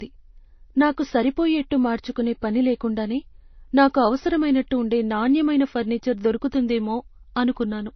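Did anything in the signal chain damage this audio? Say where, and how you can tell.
Yes, throughout: nothing above 6 kHz, with two kinds of swirling compression artefacts layered. This is likely transcoding between lossy codecs at the codec stage, consistent with low-rate MP3 re-encoded to Vorbis.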